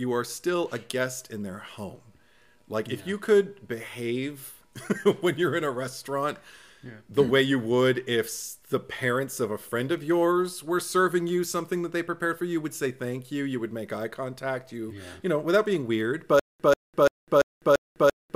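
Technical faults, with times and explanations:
16.4 to 18.36 s, stutter with silent gaps: right at the tail the sound catches on a short burst of about 138 ms and replays it five times, each followed by roughly 203 ms of dead digital silence, so it pulses at a steady 340 ms rhythm until the clip ends. That pattern likely comes from the playback or stream stalling, re-sending its last buffered fragment on each retry and then running dry, so whatever should have played there is simply gone.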